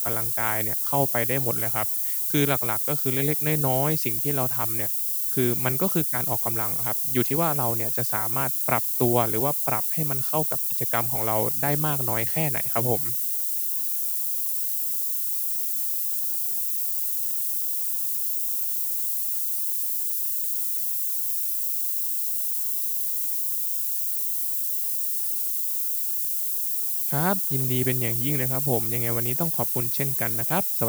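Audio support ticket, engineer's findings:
Steady thin hiss throughout, rising sharply toward the top of the band and roughly as loud as the speech. Low bit depth with noise shaping; fits 5-bit quantisation, rounding error pushed upward.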